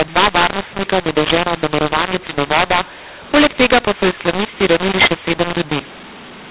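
From start to finish the speech carries a mu-law and A-law mixup: telephone audio encoded as A-law is being decoded as mu-law. Sample levels come out scrambled, so the speech sounds harsh and distorted, and the pauses fill with hiss instead of falling silent.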